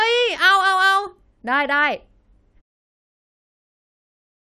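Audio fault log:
No faults found in this speech clip; the level fades out smoothly from around 2.5 s to 2.62 s, with no click or hard edge.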